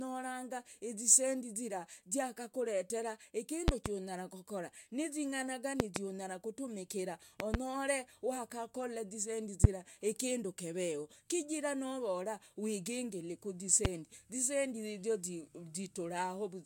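Speech with five loud pops cut in over it: double pops at 3.68 to 3.89 s, 5.80 to 5.99 s and 7.40 to 7.57 s, and single ones at 9.64 s, between "wakakola zisendi" and "kindu keveho", and at 13.85 s, right after "novora wigingili". Each stands roughly 20 to 25 dB above the speech, which carries on underneath. The likely cause is a voltage step from a plug, switch, static or driver glitch, shaped by the circuits that follow it. On a waveform they show as tall spikes, and on a spectrogram as bright vertical lines spanning the whole frequency range.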